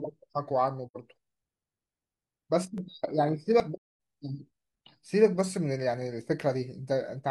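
At 0.87 to 0.97 s the speech fades into a soft-edged hole of about 85 ms, then fades back. That's AAC frame loss with muting: the decoder zeroed the missing spectrum, consistent with two lost frames. At 2.78 s and 3.6 s the speech jumps ahead, skipping roughly 10 ms and then 30 ms, likely a dropped buffer (overrun). The same muted-hole fault returns longer at 3.77 to 3.97 s, a 256 ms gap that fits about six lost frames.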